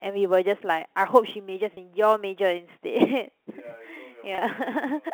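A speech recording carried over a G.711 telephone path, whose 250 Hz to 3.4 kHz band comes through cleanly. Sample clock jitter runs throughout: the converter's timing wanders by a few microseconds, so each sample lands slightly off its instant, and the error scales with how steeply the waveform moves. The result is a faint hiss or roughness, roughly 35 dB below the signal, that swells on loud, bright passages and disappears in pauses. Packet loss with pitch repetition occurs twice, at 1.74 to 1.77 s and at 4.35 to 4.38 s. Each gap lasts 30 ms, which fits a single lost packet, and the receiver bridges it by repeating the last pitch period. Both gaps are short enough that they come across as a brief held, buzzy tone rather than a dropout.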